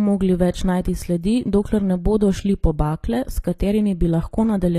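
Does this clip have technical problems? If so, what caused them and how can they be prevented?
Yes. Throughout the speech, the treble is synthetic and gritty, with nothing above 14.9 kHz. The likely cause is HE-AAC compression at a bitrate around 24 kbps, rebuilding highs from lower bands. Prevent it by encoding at a higher bitrate or with plain AAC.

At 3.58 s, a brief hiss of about 14 ms precedes an attack. This is pre-echo: the codec's quantisation noise spreads into the quiet moment before the transient. Prevent it with shorter transform blocks or a higher bitrate.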